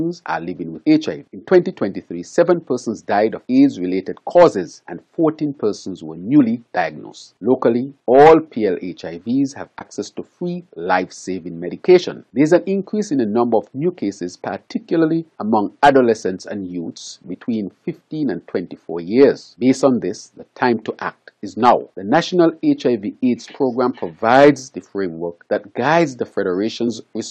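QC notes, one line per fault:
9.78–9.82 s, 17.31–17.35 s, 26.85–26.89 s: compressed frames skipped. Whole compressed frames were lost or rejected by the decoder, so playback jumps ahead by roughly 40 ms, then about 20 ms twice.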